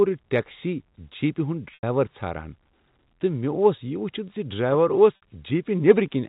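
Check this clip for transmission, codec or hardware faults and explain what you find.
Two spots of packet loss with pitch repetition stand out, at 1.74–1.83 s and at 5.16 s, just after "زِ ڈرایور اوس". When data goes missing, the receiver loops the last pitch cycle to cover the hole and fades it out. The first gap is about 90 ms long and the second about 60 ms, which fits losing three and two 30 ms packets. You hear a brief held, buzzy tone that fades into silence before the speech picks up again with a short cross-fade, over telephone-band G.711 audio.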